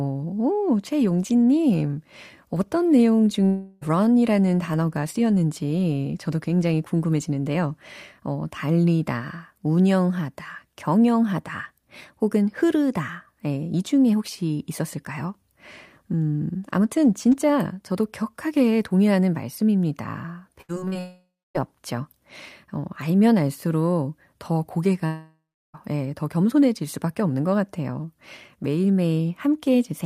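This is a speech clip with two kinds of network fault. At 3.45 to 3.83 s, just after "최용진님 어떤 내용", the sound smears into a fading buzz for about 0.36 s. Speech then resumes with that part gone. The same happens at 20.99 to 21.60 s, where about 0.56 s is lost and the fill gives way to roughly a quarter second of silence. At 25.06 to 25.76 s, between "어 알면 알수록 더" and "예 더 겸손해질 수밖에", about 0.68 s is lost, with a third of a second of silence. Each is likely a long network dropout, with the receiver stretching the last sound until it runs out. At 20.61 to 20.97 s, right after "저도 격하게 동의하는 말씀입니다", the speech turns choppy. This is repeated packet loss. Five short gaps follow one another, the longest 73 ms. Each is patched by repeating the last sound, so nearly half of that span is synthetic fill. About 0.18 s of real audio is missing.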